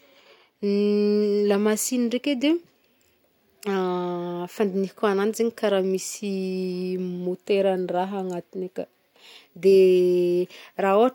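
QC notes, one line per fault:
No faults found on this speech recording.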